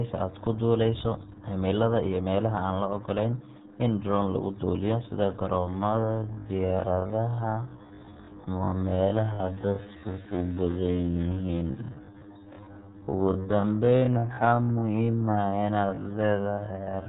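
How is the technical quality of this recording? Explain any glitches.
Quality is poor: the whole recording carries heavy low-bitrate codec damage, and the latter two-thirds is stretched out in time.

RealAudio 14.4 codec: Throughout, the speech passes through an 8 kbit/s dial-up-era coder that discards everything above 4 kHz and coarsely models what remains. It sounds muffled and gargly. A simple low-pass filter would dull the sound without that bubbling texture.

Time-stretched section: From 5.55 s to the end at 17.08 s, the speech slows abruptly to about half speed (0.525×), yet its pitch stays put. That points to software stretching, likely by repeating short slices. A slowed tape would drop in pitch instead.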